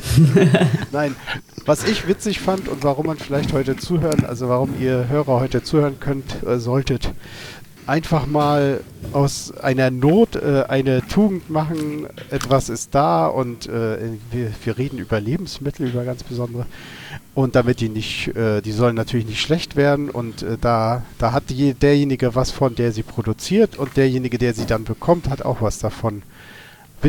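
No technical faults are audible anywhere in the clip.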